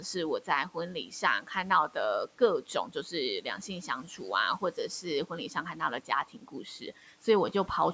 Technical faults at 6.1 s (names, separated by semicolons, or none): speech cut by the noise suppressor